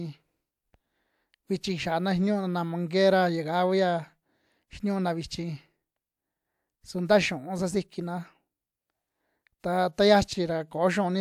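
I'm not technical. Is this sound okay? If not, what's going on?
Yes, I can't hear any technical problem here.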